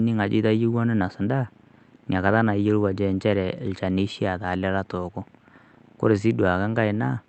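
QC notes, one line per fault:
No faults found in the speech; the band limit heard from the call path, around 8 kHz, is that path working normally.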